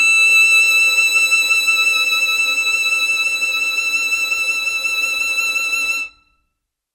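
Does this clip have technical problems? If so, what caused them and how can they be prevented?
No, this music clip has no technical problems.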